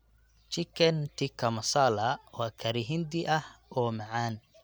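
No technical faults can be heard anywhere in the recording.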